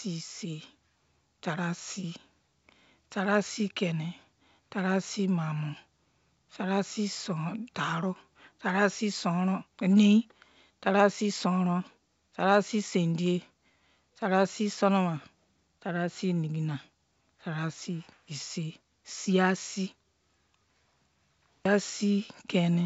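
No technical faults are audible.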